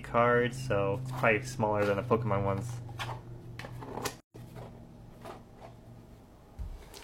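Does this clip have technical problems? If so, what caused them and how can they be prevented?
Yes, there's a gap at a join of encoded pieces from 4.20 to 4.34 s: about 141 ms of dropout, then the sound resumes where it stopped. Separately encoded chunks were joined with their start delay and end padding left in. Trim those, or encode in one pass.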